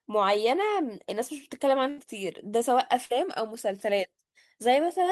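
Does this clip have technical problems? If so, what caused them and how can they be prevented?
Yes. A burst of packet loss runs from 1.89 to 1.99 s. The receiver filled about 80 ms by extending the last sound and fading it, so it comes out as a held buzz or hiss. The speech then resumes with about 80 ms simply gone. On a spectrogram the harmonics flatten into frozen horizontal bands that dim, then the next segment starts abruptly. A larger jitter buffer and forward error correction would prevent this.

Short concealed packet loss occurs at 3.05 to 3.12 s. About 40 ms of audio arrived too late for the decoder, and roughly 42 ms of synthesized continuation was blended in. It is heard as a brief smear or wobble in the speech. The waveform shows a short, over-smooth repeated cycle where the natural envelope should vary. In the spectrogram, the detail is smudged briefly before normal texture returns. 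A steadier network path, or in-band redundancy such as codec FEC, would prevent these gaps.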